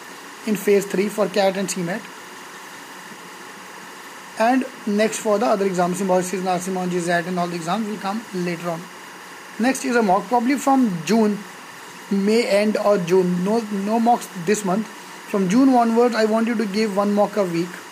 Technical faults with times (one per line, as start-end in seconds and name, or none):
0.00-17.92 timecode bleed